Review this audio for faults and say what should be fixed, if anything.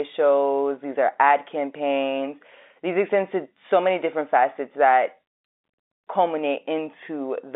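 Nothing needs fixing: the speech comes through a G.711 telephone coding path with the usual line band of roughly 250 Hz to 3.7 kHz, and any coding damage is faint at most.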